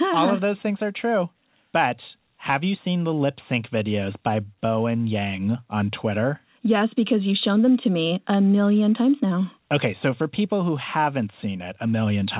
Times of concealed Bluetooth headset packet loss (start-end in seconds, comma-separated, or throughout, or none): none